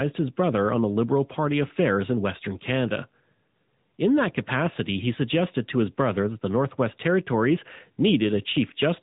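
Throughout, AMR narrowband mobile codec coding removes everything above 3.8 kHz and, unlike a plain low-pass filter, leaves a buzzy, synthetic edge that fits a 10.2 kbps mode.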